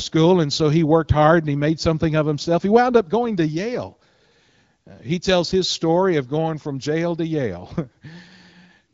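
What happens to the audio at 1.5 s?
Nothing goes wrong at 1.5 s: the speech passes through intact, carried by the AMR wideband (HD Voice) codec at 15.85 kbit/s, which leaves only light coding colour at that moment.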